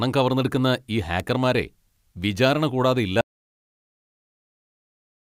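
At 1.20 s a sharp snap cuts across the speech. It is an electrical switching spike. A nearby switch, motor or static discharge likely arced, and the audio line picked up that brief burst. It sits on top of the voice.

From 3.21 s the speech stops dead and never returns. This is an audio dropout to silence. The input was likely lost, perhaps through a disconnected device or failed link, while recording continued as silence. No room tone remains to the end.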